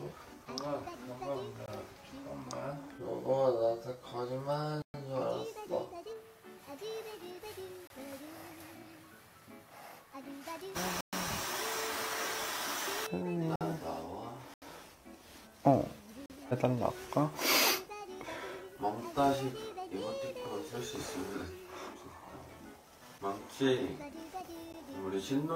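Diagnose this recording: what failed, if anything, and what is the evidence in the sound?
Driver or buffer stage: blocks of digital silence at 1.66 s (21 ms), 4.82 s (120 ms), 7.87 s (27 ms), 11.01 s (120 ms), 13.56 s (51 ms), 14.54 s (80 ms), 16.26 s (40 ms) and 24.73 s. Output buffers likely went unfilled, so the sound cuts out abruptly and back. On the waveform these are flat lines. On the spectrogram they are empty vertical gaps.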